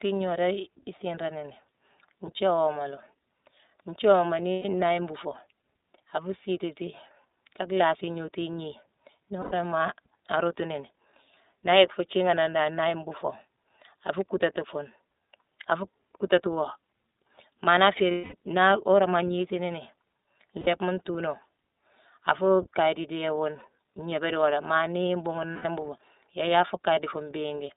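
iLBC codec, throughout the speech: the audio passes only about 250 Hz to 3.7 kHz, and each 30 ms frame's excitation is coded on its own, which fits iLBC's 13.33 kbps mode. The result is plainly audible as a thin, slightly rough, synthetic edge on every syllable.

Lost iLBC frames occur at 4.54 s (120 ms), 9.41 s (90 ms), 18.12 s (210 ms, the longest), 20.61 s (60 ms) and 25.53 s (120 ms). In each gap the decoder repeats the last pitch cycle blended with noise, so the sound holds as a buzzy, breathy vowel. During the 210 ms gap, which fits seven missing frames, this held sound fades. Clear speech returns almost immediately after each gap.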